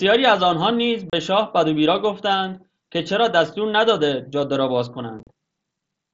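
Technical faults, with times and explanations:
1.10–1.13 s and 5.19–5.27 s, unconcealed Bluetooth headset packet loss: headset voice packets went missing and nothing filled the gaps, leaving a 30 ms hole, then 45 ms of dropouts scattered across 75 ms, all with abrupt edges.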